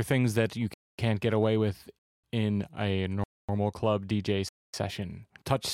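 Gaps between chunks hit at 0.74, 1.99, 3.24 and 4.49 s. Each is a 250 ms silence. The speech arrives in 1 s chunks with silence left between them.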